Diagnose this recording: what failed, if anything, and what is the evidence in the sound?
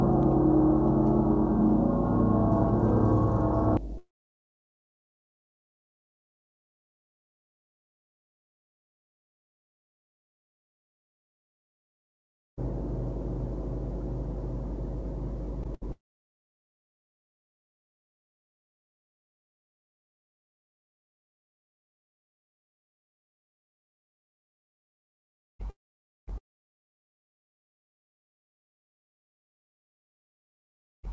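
Mains hum sits under the whole recording as a steady 50 Hz tone with low harmonics. It is loud, only a few decibels below the wanted sound. This is an analogue wiring fault, most likely a ground loop or a transformer coupling the power line into the signal before conversion. Its fixed pitch at exactly the mains frequency, with no change over time, separates it from codec noise or acoustic rumble, which wander.

A long network dropout runs from 3.98 s to 12.59 s, about 8.6 s in all. The last sound is extended briefly as a fading buzz, then there is near-silence for most of that span. The sound resumes later without the lost section. A likely cause is a stalled network path feeding the jitter buffer. The loss of content distinguishes this from a local mute or a playback stall, which would resume where it stopped.

Sound chopped by the voice detector affects the stretch from 15.63 s to 31.08 s. 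Almost all of it, about 15.0 s, is replaced by synthetic comfort noise. This likely points to the sender's call processing gating the signal repeatedly. Unlike the dropout, the gap is filled with comfort noise rather than left silent. It is heard over a call path that carries nothing above 8 kHz.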